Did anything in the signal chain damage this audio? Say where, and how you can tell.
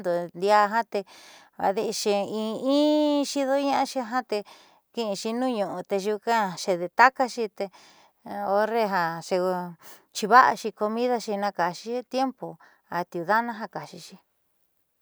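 No, nothing in the chain audibly damaged this speech.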